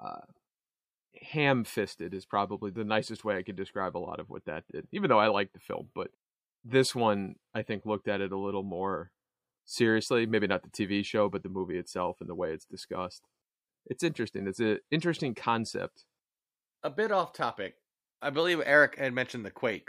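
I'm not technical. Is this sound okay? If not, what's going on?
Yes, nothing in this recording points to a technical problem with how the sound was captured, stored or played back.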